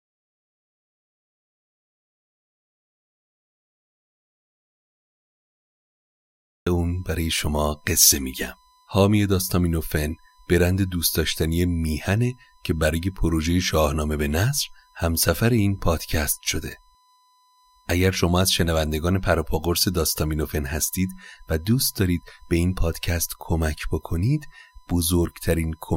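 A speech recording carries two faults. Audio dropout to silence: the input was most likely lost, through a disconnected device or a failed link, while the recorder kept writing silence, so the clip opens in silence with no room tone until 6.67 s, when speech arrives already in mid-flow. USB whine: the bus draws current in 1 ms frames, and that load leaks into the audio through shared power or ground, leaving a fixed-pitch 1 kHz whine under the speech for the whole clip, about 40 dB below it.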